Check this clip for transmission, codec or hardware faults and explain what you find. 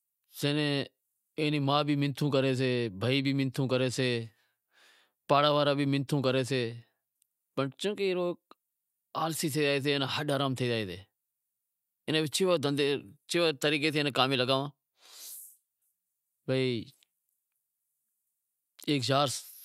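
Nothing stood out on listening to this speech recording that would point to a problem in how it was transmitted, encoded or captured.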